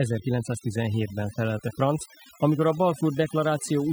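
Across the whole clip the background collapses to near silence dotted with twinkling specks. That is overdone noise removal: the reduction was set so strong that bands near the noise estimate were cut away, taking quieter vocal detail with them.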